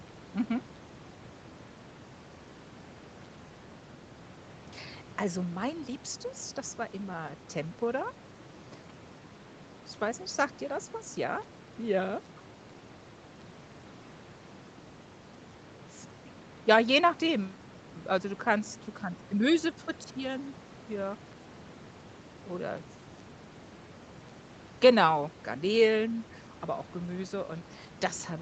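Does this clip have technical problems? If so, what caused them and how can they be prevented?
No, there are no technical faults.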